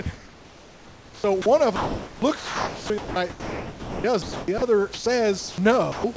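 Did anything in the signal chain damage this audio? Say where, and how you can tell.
Yes. Sound chopped by the voice detector, 0.02–1.46 s and 1.76–4.62 s: sender-side call processing likely gated speech repeatedly, so 1.2 s and 2.2 s become comfort noise.

Sound dropped by the voice detector at 4.94–5.06, 5.38–5.58 and 5.92–6.04 s: quiet speech, likely mistaken for background, gives way to steady comfort noise until sending resumes.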